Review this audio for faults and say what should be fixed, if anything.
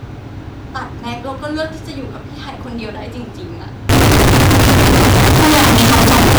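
From 3.89 s to the end at 6.39 s the speech turns into a harsh, very loud, nearly square buzz sitting at an almost fixed, high level, with the background noise as loud as the speech, though the pitch contour stays traceable. This is likely a float read as integer fault: 32-bit float samples interpreted as 32-bit integers, so sign and exponent bits dominate each value. Unlike ordinary clipping, the quiet passages and the noise floor are blown up to the same level as the loud ones. To prevent it, tag and check the sample format at every file and buffer handoff so float data is never decoded as integer PCM.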